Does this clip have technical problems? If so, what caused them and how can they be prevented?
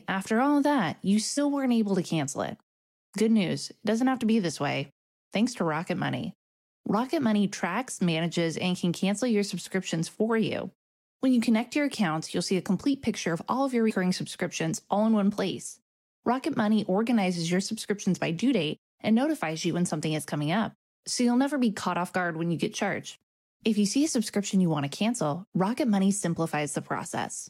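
Yes. Compressed frames are skipped at 1.37 s, 7.61 s and 13.90 to 13.92 s. At each point the decoder drops whole frames that are missing or rejected as damaged, and playback jumps ahead. The first and third gaps lose roughly 70 ms, consistent with about three frames. The second loses only a few milliseconds. To prevent this, transfer and store the encoded file with checksums or error protection, and re-encode from an intact source.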